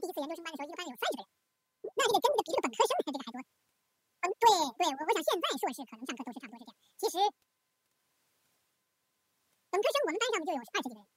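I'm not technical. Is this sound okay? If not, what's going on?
No. Audio read two samples at a time (double speed) makes the whole speech clip run twice as fast and a full octave higher, unlike speed-ups that keep pitch.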